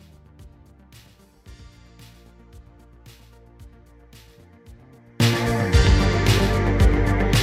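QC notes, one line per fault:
0.0–5.20 s: one channel inverted. In mono the sound drops about 29 dB, leaving a faint residue. Likely one stereo channel has reversed polarity, cancelling shared content.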